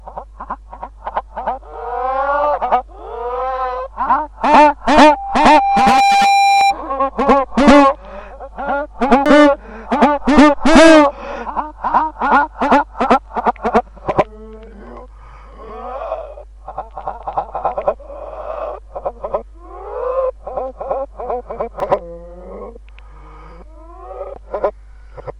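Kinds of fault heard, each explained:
Loudspeaker feedback squeal: A microphone is hearing the loudspeaker it drives, and at 794 Hz the gain around that loop exceeds unity, so the tone feeds itself. From 4.85 s a single pitch rises out of the sound, swelling over roughly a second into a howl around 5 dB above the surrounding audio, until it stops at about 6.76 s, when the loop is broken or limited.
Damaged data in a compressed stream: Corrupted bytes in the encoded stream cause the decoder to misread frames, lose sync and search for the next valid header, producing short chirps or blips. Brief, single glitches appear at 6.61 s (just before the squeal ends), 9.26 s, 21.80 s and 24.36 s. A slightly longer disturbance runs from 15.69 to 15.74 s.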